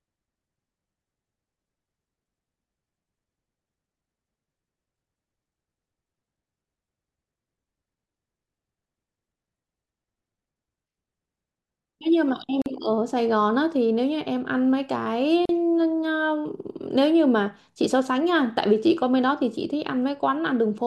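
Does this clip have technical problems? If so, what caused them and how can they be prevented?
Yes. A gap at a join of encoded pieces opens at 12.62 s for about 43 ms and at 15.45 s for about 38 ms: separately encoded speech segments were concatenated untrimmed, so encoder start delay and final-frame padding leave short, smeared silences. Prevent it by trimming encoder delay and padding before joining, or encoding continuously.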